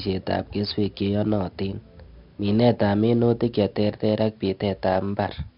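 4-bit ADPCM compression runs throughout the speech, heavily. Each sample is coded as a coarse step from a prediction, so a gritty hiss rides every loud passage and sharp onsets distort. Nothing sounds above 5.3 kHz, dulling the audio, which fits roughly 44 kbps.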